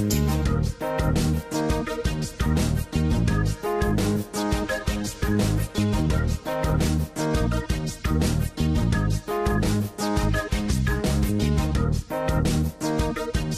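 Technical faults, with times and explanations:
Throughout, MP2 compression: dull, gurgly and grainy, likely from low-rate Layer II coding around 80 kbps starving the upper sub-bands so they drop out and flicker.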